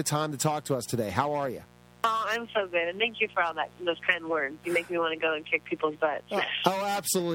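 Mains buzz runs through the whole clip, sitting about 25 dB below the sound. Sharp switching spikes from a dimmer, rectifier or unshielded lead enter twice per 60 Hz cycle, spraying harmonics up into the kilohertz range and producing a steady, raspy buzz underneath.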